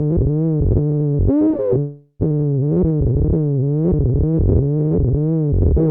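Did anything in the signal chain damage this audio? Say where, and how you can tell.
Yes, a call audio freeze at 1.79 to 2.23 s: a fading buzz, then 70 ms of silence, likely from delayed network packets draining the jitter buffer.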